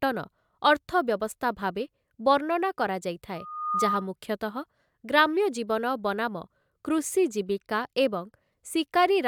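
At 3.35 s a loudspeaker feedback squeal kicks in: the mic is hearing its own speaker, and around 1.2 kHz the loop gain tips past one. The tone swells over roughly 0.4 s to about speech level, then drops out at 4.08 s.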